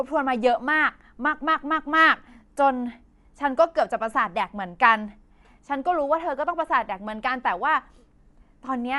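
Speech runs throughout with plainly audible codec damage, most likely from Dolby Digital compression at a low bitrate, which fits a 64 kbps stream. Nothing remains above 11.4 kHz, so it sounds dull, and sparse frequency lines refilled with dither noise leave a rough, fluttering texture around tonal parts.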